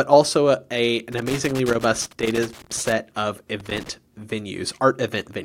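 Loose connector crackle runs from 1.12 to 2.92 s, right after "also a a", and returns briefly from 3.60 to 3.89 s. A worn or dirty contact in the signal path is making and breaking as it shifts, so the speech is chopped into rapid fragments and any DC sitting on the line turns each break into a pop. Both stretches come through as irregular bursts of scratchy crackle over the speech.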